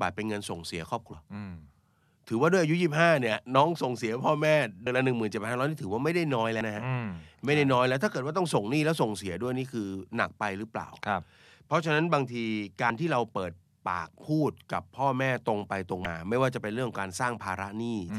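At 1.12 to 1.15 s, 4.86 s, 6.60 s and 16.05 s the speech jumps forward because compressed frames were skipped. The decoder never received those frames or rejected them as corrupt. Each gap drops about a tenth, a twentieth, under a tenth and again a tenth of a second of audio.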